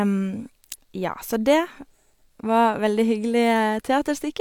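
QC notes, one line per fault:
No faults were found in this speech recording. There is nothing to log for any part of it.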